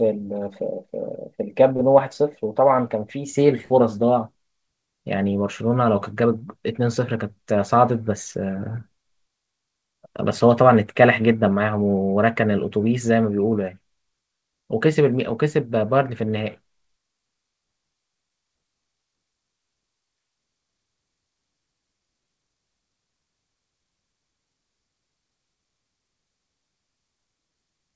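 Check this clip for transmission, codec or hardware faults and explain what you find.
No transmission, codec or hardware faults.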